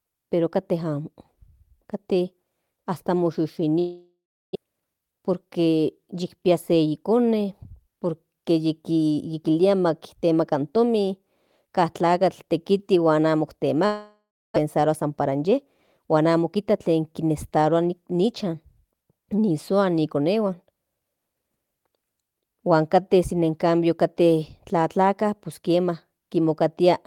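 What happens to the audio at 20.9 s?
At 20.9 s the speech carries on intact, with no dropout, click, distortion or other fault at that moment.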